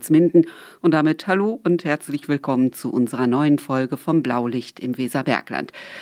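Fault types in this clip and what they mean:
No faults can be heard.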